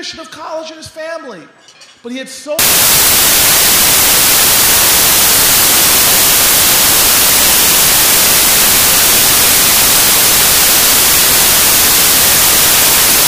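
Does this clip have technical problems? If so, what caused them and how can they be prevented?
Yes. From 2.59 s to the end, samples built from the wrong bytes turn the audio into loud, harsh broadband noise: misaligned or swapped bytes promote the fast-changing low bits to the top of each value. A spectrogram shows flat full-band energy, and the waveform a dense block. Preventing it means checking the declared sample format, byte order and frame alignment when reading the stream.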